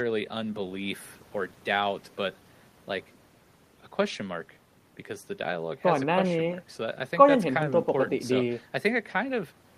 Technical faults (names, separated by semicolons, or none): none